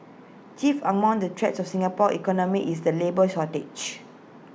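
A speech recording with nothing technically wrong with it, so there are no times or causes to report.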